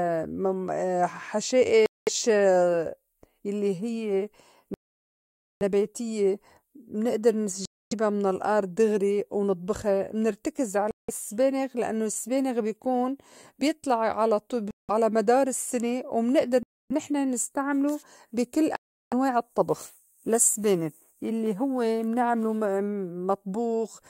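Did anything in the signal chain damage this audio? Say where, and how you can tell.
Yes. The speech drops to silence seven times, starting at 1.86, 4.74, 7.65, 10.91, 14.71, 16.63 and 18.76 s. Most gaps last about 180 to 360 ms. The one at 4.74 s runs 870 ms. Each time, the speech resumes after the gap. This points to the playback stage, most likely a Bluetooth stall. The headphones' buffer emptied while delayed packets were resent, so output stopped until data arrived again.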